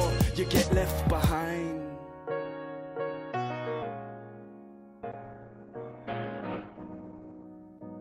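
A call bitrate drop hits the audio from 5.17 s to 7.57 s. The call's bandwidth estimate collapsed, so the encoder was squeezed to a fraction of its bits, coarsening the coding and cutting the top end from 20 kHz down to 8 kHz. For about 2.3 s the sound turns muffled and watery, which fits a fall from around 96 to 12 kbps.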